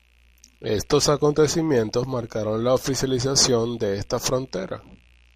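No technical faults can be heard anywhere in this speech recording. Nothing in the audio stands out as a defect to report.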